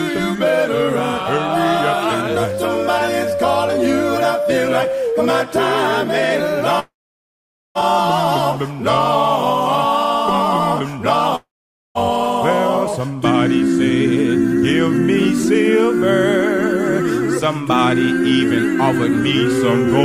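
At 6.79 s the sound gives way to a brief fading buzz, then near-silence until 7.78 s. The same happens from 11.36 to 11.98 s. These gaps, losing about 960 ms and 600 ms, are likely long network dropouts; playback resumes past the missing audio.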